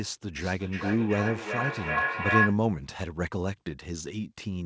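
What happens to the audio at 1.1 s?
At 1.1 s the speech is inside a feedback echo between two devices, running from 0.38 to 2.67 s. A second device in the room replays this talker's audio, and the microphone picks it up again outside the reach of its own echo canceller. Each syllable returns roughly every 400 ms, thinner and more ringing, and the repeats build up instead of fading, peaking at about 1 dB above the direct speech within the 8 kHz band of the call path.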